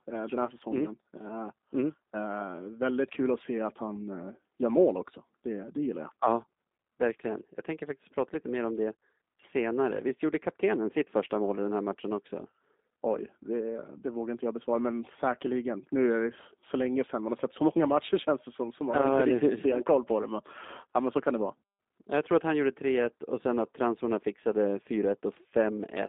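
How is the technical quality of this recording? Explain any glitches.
Quality's fair but clearly phone-grade, with two short dropouts.

The whole clip carries G.729 codec damage. Everything sits between roughly 200 Hz and 3.7 kHz, and the rebuilt voice sounds plainly rough and synthetic, which fits 8 kbit/s G.729A.

Packet loss concealed by the speech codec shows up at 0.45–0.52 s and 6.54–6.57 s. About 30 ms goes missing each time, consistent with one lost packet. The decoder fills the gap with a fading, buzzy or noisy stretch of the previous sound.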